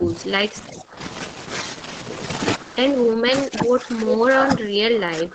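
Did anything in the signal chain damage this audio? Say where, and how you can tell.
Yes. The speech dips from 0 to 0.11 s, 0.72 to 0.96 s, 3.15 to 3.96 s and 4.62 s to the end, by about 15 dB (about 10 dB in the third). This is likely speech suppressed in double talk by the call's echo canceller. Unlike dropouts, the attenuation is partial and uneven rather than silent.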